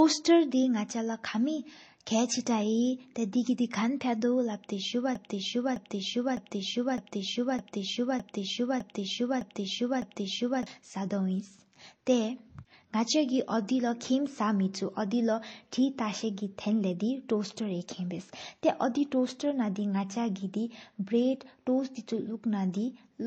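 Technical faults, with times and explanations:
Throughout: transcoding between lossy codecs. Smeared, watery artefacts of two different codecs overlap, and nothing remains above 8.3 kHz. This likely fits low-bitrate MP3 re-encoded as HE-AAC.
5.15 to 10.66 s: broken-record loop. A 0.61 s fragment repeats nine times back to back, and the sound that belonged there is lost. The stream or player likely stalled on its last buffer.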